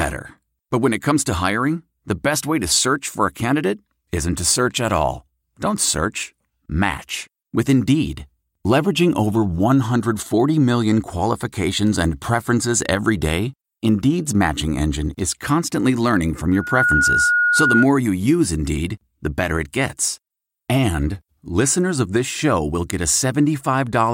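A microphone picking up its own loudspeaker ran away at 1.4 kHz. From 16.52 to 17.86 s, after "is constantly learning from", a loudspeaker feedback squeal swells within about a third of a second to ride over the speech.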